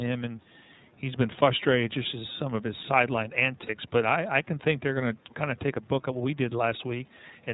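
Speech coded with the iLBC codec at 13.33 kbps in 30 ms frames has plainly audible damage throughout. Nothing above 4 kHz survives, and the voice sounds slightly rough and synthetic rather than merely dull, which separates it from simple band-limiting. At 3.66 to 3.70 s a lost iLBC frame covers 30 ms with a brief buzzy, held vowel from repeated pitch cycles. The voice returns cleanly at once, unlike a codec whose errors linger over following frames. At 5.29 to 5.35 s a very faint copy of the voice sits far below the speech, delayed by 224 ms. This is likely an echo leak from a loudspeaker whose echo canceller let some sound through. The delay marks it as a returned copy rather than room reverberation, which would trail off smoothly from the original.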